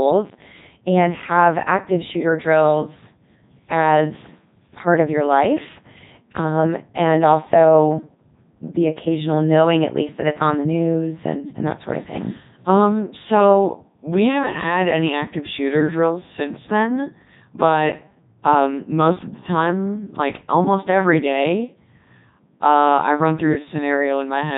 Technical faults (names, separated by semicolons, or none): Codec 2 vocoder